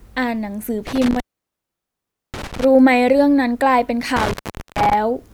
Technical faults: intermittent contact

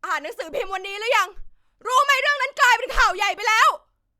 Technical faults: none

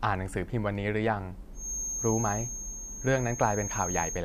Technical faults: feedback whistle

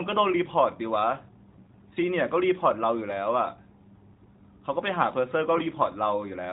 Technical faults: AMR bit errors

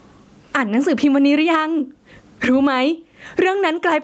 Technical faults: gain pumping

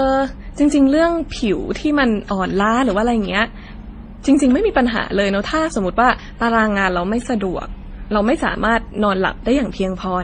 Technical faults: transcoding between lossy codecs

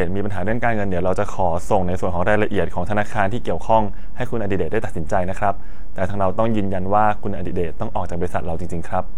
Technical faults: DC offset

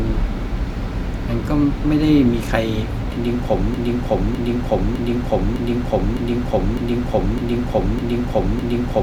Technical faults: broken-record loop

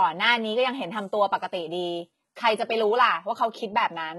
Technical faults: HE-AAC compression

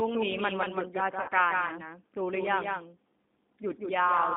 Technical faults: doubled audio track; G.729 codec; VoIP packet loss concealed by the speech codec

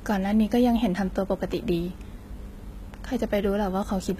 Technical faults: HE-AAC compression

